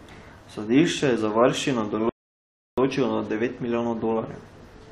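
At 2.09 s, right after "je za varščino", the speech stops dead and silence holds until 2.78 s, adding about 0.68 s to the clip. This is a rebuffering stall: playback ran out of downloaded audio and paused until more data arrived. What separates it from a dropout or packet loss is that the speech picks up exactly where it halted, with nothing skipped or concealed. The gap adds time without removing anything.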